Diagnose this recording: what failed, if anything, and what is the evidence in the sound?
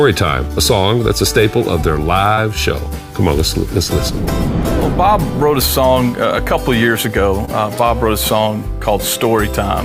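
Network stage, short concealed packet loss at 2.33 and 7.45 s: 40 ms and 20 ms never arrived, so the decoder extended the preceding sound, heard as brief smears.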